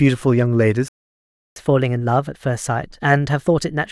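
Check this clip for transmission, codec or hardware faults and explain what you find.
Two linked faults are audible: a playback stall followed by catch-up at higher speed.

From 0.88 s to 1.56 s the speech stops dead for about 0.68 s. This is a playback stall, most likely the player running out of buffered data or its output thread being held up. It differs from a packet dropout because the silence is far longer than a typical dropout gap.

From 1.56 s to the end the player uses catch-up at higher speed, resampling its backlog to run at 1.15 times normal speed to recover the lost time. Because resampling speeds up playback and raises pitch together, the speech sounds hurried and about two semitones higher. A pure pitch-shift fault would change the pitch but leave the pace untouched, and a time-stretch would speed things up without raising the pitch.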